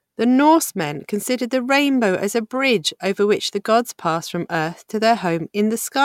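No dropouts, glitches, level jumps or other transport faults turn up anywhere in the speech.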